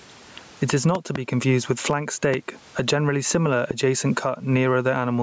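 Gain pumping runs through the whole clip, with a gain swing of roughly 20 dB. The loud and quiet parts sit squashed together. That's most likely the input gain set way too hot for the mic, with a fast limiter or compressor clamping down on each loud moment. The room noise sits about 42 dB below the speech.

The first loud pop comes between 0.95 and 1.18 s, just before "confused with flank". It's a double hit, two sharp pops in quick succession landing roughly 20 dB above the speech. The second is a single pop at 2.34 to 2.36 s, between "confused with flank" and "a generally similar adjacent", roughly 10 dB over the signal. The third, at 3.71 to 3.73 s right after "a generally similar", is somewhere around 15 dB up. Each one sounds like a sudden electrical spike riding on top while the speech carries on underneath, likely from a plug, switch, static or driver glitch.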